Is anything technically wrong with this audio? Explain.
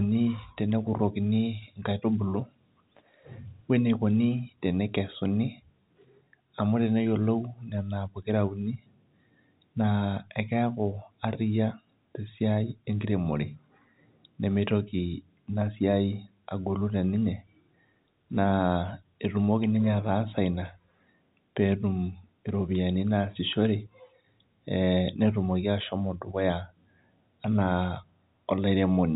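No, nothing in this speech recording stood out as a technical problem on listening.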